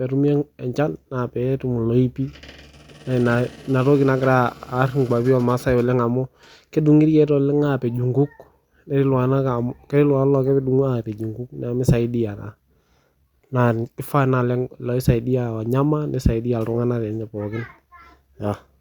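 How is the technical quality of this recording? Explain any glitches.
No technical faults are audible anywhere in the speech, so there are no glitches to account for.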